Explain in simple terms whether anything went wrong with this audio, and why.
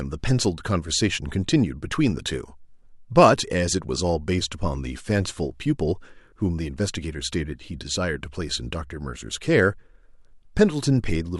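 Nothing went wrong here: the speech comes through steadily the whole way, with no glitches, dropouts or odd noises to catch the ear.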